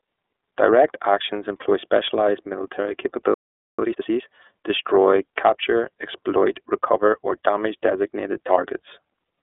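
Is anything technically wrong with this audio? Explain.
Yes, there are three faults.

Throughout, the speech is squeezed into a telephone band of roughly 300 Hz to 3.6 kHz, with nothing above 4 kHz, and has a rough, slightly synthetic grain. That points to the iLBC codec in its 30 ms frame mode, where each frame's excitation is coded independently. This frame-by-frame roughness sets it apart from simple band-limiting, which would only dull the sound.

From 3.34 to 3.79 s the audio cuts to silence for about 0.44 s, then resumes. This is a playback stall, likely the player starving for data or being blocked. The sound simply pauses mid-flow.

From 3.79 to 4.23 s the speech rushes at twice normal speed while its pitch stays unchanged. This is time-compressed catch-up, where small pieces are cut out and cross-faded to clear the backlog left by the stall. The unchanged pitch distinguishes it from a sped-up playback rate, which would raise it.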